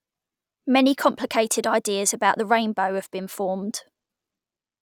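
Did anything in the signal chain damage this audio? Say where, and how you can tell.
No, nothing in the chain audibly damaged this speech, so there is no stage to point to.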